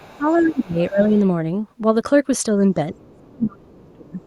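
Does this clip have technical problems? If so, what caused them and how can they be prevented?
Yes. An echo canceller likely failed to fully remove the far end's loudspeaker sound from the microphone, so other side's voice leaking through is heard faintly, well below the talker, from 0.0 to 0.61 s, at 0.80 to 0.84 s, from 3.01 to 3.2 s and from 4.21 s to the end. Using a headset or better acoustic echo cancellation prevents this.

Speech suppressed in double talk comes from the same echo canceller, likely unable to tell the local talker from the echo while both sides spoke. It turned everything down from 0.08 to 1.17 s and again from 2.92 to 4.2 s. The voice dips by as much as 20 to 30 dB. Double-talk detection that keeps near-end speech would prevent this.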